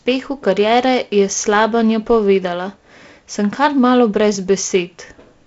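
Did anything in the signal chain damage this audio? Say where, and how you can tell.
No, nothing in the signal chain damaged this audio.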